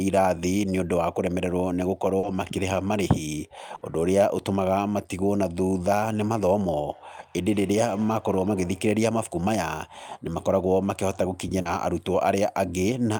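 At 2.19 to 2.25 s and again at 11.61 to 11.67 s there is short concealed packet loss: about 40 ms of speech never arrived, and the receiver continued the preceding sound and then blended back into real audio, leaving a brief smear rather than an audible gap.

A burst of packet loss follows at 3.75 to 3.83 s. Here 60 ms is missing, long enough that the stretched-out sound fades away under concealment before the speech resumes further along, with the intervening part gone.

From 6.9 to 9.02 s a feedback echo between two devices appears. The speech comes back faintly, at about 22 dB below the talker, at a fixed spacing of roughly a fifth of a second, thinner and more ringing than the original. That fixed spacing distinguishes it from room reverberation.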